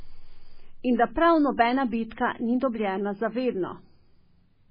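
Throughout the speech, the encoder has likely been starved of bits by MP3 compression at a very low rate, the damage pointing to something around 16 kbps. Short of data, it drops everything above 5 kHz and zeroes weaker frequency lines, which flicker on and off from frame to frame. The result is dull, band-limited speech with a heavy watery, swirling texture, metallic chirps on sibilants, and smeared consonant attacks.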